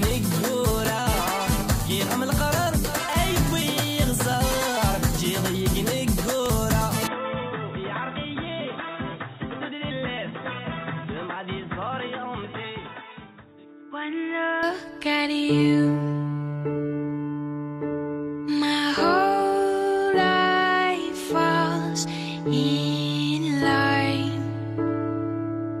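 From 7.07 s to 14.63 s the audio abruptly turns dull and boxy, with nothing above 3.8 kHz, a drop of roughly 5 dB and a faint new noise floor far below the signal. At 14.63 s it clears again, with no silence at either switch. That points to the input likely having switched to a poorer device. A mere filter or codec bandwidth change would not also shift the level and background noise together.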